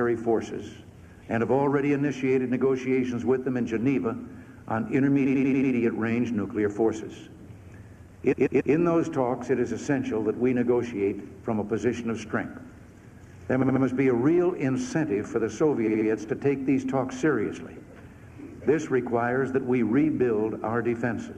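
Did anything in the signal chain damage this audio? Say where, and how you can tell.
Yes, repeated frames at the codec or storage stage. A short block loops as a stutter at 5.25–5.71 s, 8.32–8.73 s, 13.61–13.82 s and 15.86–16.07 s, with blocks of about 93, 139, 70 and 70 ms that fit whole compressed frames being written or sent again.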